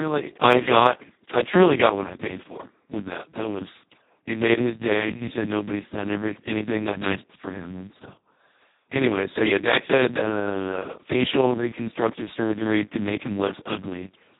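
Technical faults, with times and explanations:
Throughout: Speex codec. The speech was squeezed at a very low setting, one that fits a bitrate around 2 kbps, leaving almost no bits for the excitation, so the speech comes out hoarse, noisy and robotic, with nothing above 3.8 kHz.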